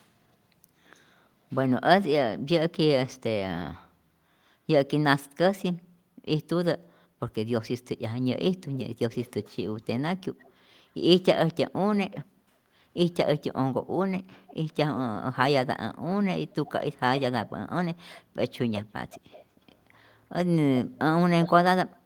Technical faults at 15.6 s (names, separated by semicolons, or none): none